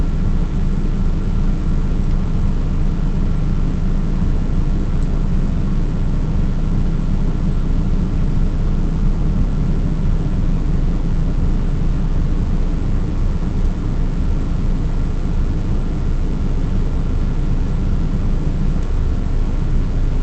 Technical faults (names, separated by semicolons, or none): jitter buffer speed-up